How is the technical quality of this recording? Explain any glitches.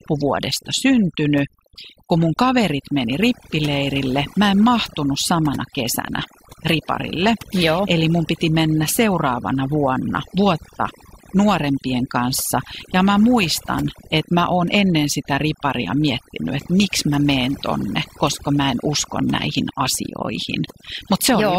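The main problem is overdone noise removal, present for the whole clip.

Throughout the recording, noise reduction set too strong pulls individual frequency bands down or off wherever they fall near its noise estimate, and quieter parts of the speech go with them. The background breaks into twinkling, warbling specks. On a spectrogram, the noise floor shows as scattered isolated dots with dark gaps between them, and low-level speech detail looks carved away. In the waveform, pauses appear hollowed out instead of carrying a steady floor.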